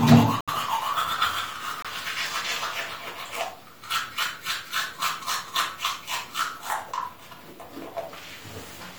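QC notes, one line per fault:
0.41–0.50 s, corrupt frame muted: the audio cuts abruptly to silence for about 90 ms, matching roughly three compressed frames the decoder rejected as damaged and replaced with silence, with timing preserved.
1.82–1.86 s, corrupt frame muted: a shorter hole of about 40 ms starts just as suddenly, fitting two rejected frames filled with silence, and the audio resumes on time.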